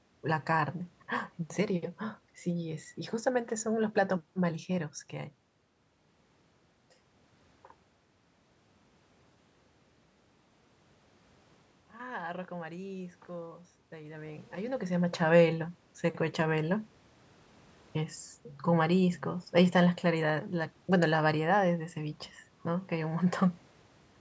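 A speech recording with one real problem: automatic gain rising between about 11.97 and 14.83 s. The automatic gain control decides the input has got too quiet and ramps its gain up by about 5 dB over those 2.9 seconds, so the voice and the room noise behind it swell together. That shared lift is the giveaway. The level shifts around 5 s and near 14.5 s are just the talker moving, and the top end stopping at 8 kHz comes from the call's microphone processing.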